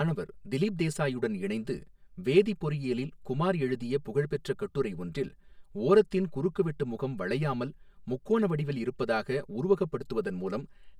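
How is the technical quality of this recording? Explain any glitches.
The speech has a hollow, phasey colour from start to finish, caused by a channel delay producing comb filtering.

It runs through the whole clip. One channel lags the other by roughly 5 ms, and when the two are folded down to mono, the shared speech cancels wherever the delay flips it out of phase. That carves fixed notches starting somewhere around 100 Hz and repeating up the spectrum, so the speech comes across hollow and a bit like it's coming through a tube.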